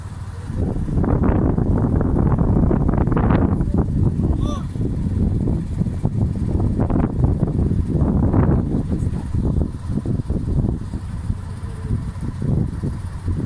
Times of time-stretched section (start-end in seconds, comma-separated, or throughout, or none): none